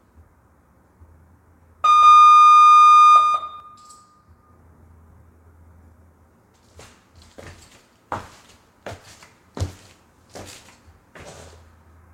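It's a clip of everyday sounds, and from 2.02 to 3.60 s there's a doubled audio track: a second full-band copy trails about a fifth of a second behind, a few dB quieter, dry, with abrupt edges. Likely a slower second capture path or a misaligned edit.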